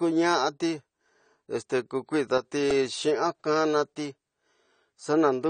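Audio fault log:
Throughout: AAC compression. Nothing comes through above 9 kHz, so the speech sounds dull and a bit closed-in, and the codec damage is plainly audible, with a smeared, slightly warbly, fizzy edge on sibilants and held sounds. That's most likely low-rate AAC-LC, where the encoder lowers its cut-off and quantises the remaining bands hard against its hearing model to save bits. The overall character fits a bitrate somewhere around 32 kbps.
2.38 to 2.45 s: one channel drops out. For roughly 70 ms the level sags by about 6 dB and then snaps straight back, a quick dip rather than a fade. That's the signature of likely losing one stereo channel briefly before the mono fold-down: material common to both sides falls by half in amplitude, and anything carried only on the missing side vanishes for that stretch.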